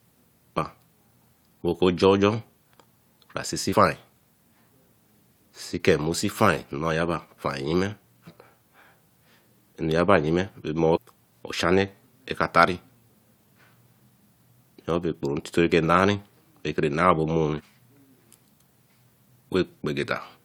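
At 0.56, 3.72, 8.26, 10.95 and 17.59 s the speech carries short glitches of 20 to 22 ms each. This is damaged data in a compressed stream: corrupt bytes make the decoder misread frames until it resyncs.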